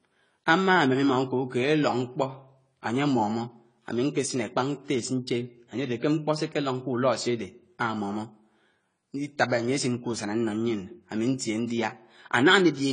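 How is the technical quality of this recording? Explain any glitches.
The technical quality is limited by codec damage that runs through the whole speech clip. It sounds like AAC compression at a low bitrate. Nothing is heard above 10 kHz, so the top end is gone and the sound is dull. The damage is plainly audible. Sibilants turn fizzy, and sustained sounds have a smeared, warbling texture. This is likely caused by an AAC-LC encoder working with too few bits. It cuts high frequencies and coarsely quantises what remains, which fits a rate of around 24 kbps.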